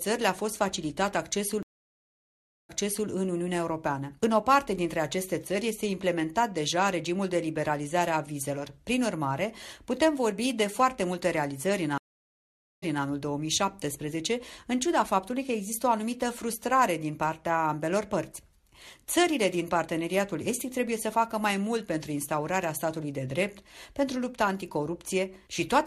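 At 1.63 s and 11.98 s the stream reconnect fault occurs. The dropped connection leaves silences of 1.06 s and 0.85 s, then a restarted decoder repeats the previous 0.40 s and 0.21 s.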